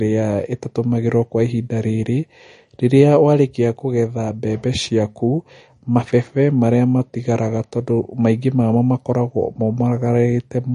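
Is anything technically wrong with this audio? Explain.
Yes. Throughout the speech there is a plainly audible watery, swirly texture, and the treble stops dead at about 10.6 kHz, so the s sounds and consonant attacks come across dull and smeared. This is likely MP3 compression at a low bitrate, consistent with roughly 40 kbps. Short of bits, the encoder removes everything above a fixed cutoff and discards weaker frequency detail. That detail then drops in and out from one frame to the next, producing the swirling.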